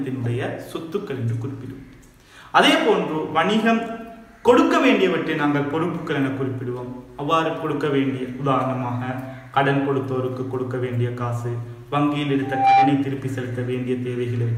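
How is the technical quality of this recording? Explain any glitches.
One glitch stands out near the end. From 12.42 to 13.08 s there is loudspeaker feedback squeal: the microphone re-captures its own speaker, so a 789 Hz tone swells within a third of a second to about 10 dB above the sound. On a spectrogram it shows as a bright horizontal line.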